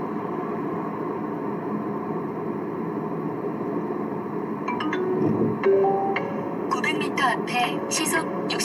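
No technical faults can be heard anywhere in the audio, and the signal remains steady and intact throughout.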